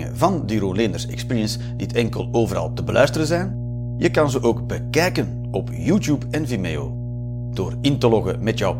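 A speech clip with mains hum running through its whole length. It is a steady low tone at 60 Hz with some low harmonics. It sits only a few decibels below the speech. A ground loop or nearby transformer has coupled the power line into the signal.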